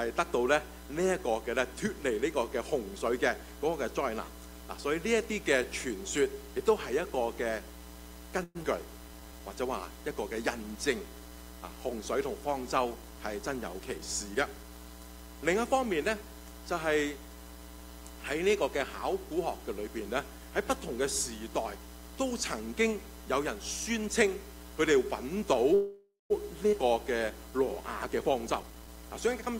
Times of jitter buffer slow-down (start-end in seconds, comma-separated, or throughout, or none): 9.08-9.40